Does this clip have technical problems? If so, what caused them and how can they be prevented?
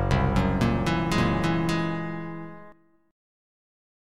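Yes. From 1.14 s to 2.72 s there is a doubled audio track, likely from the same signal reaching the mix twice, once directly and once through a slower path running about half a second behind. The late copy is full-band, roughly as loud as the original, and carries no decay or room colour, so everything is repeated cleanly, and the copy appears and vanishes abruptly at those two points. To prevent it, route each source to the mix through one path only.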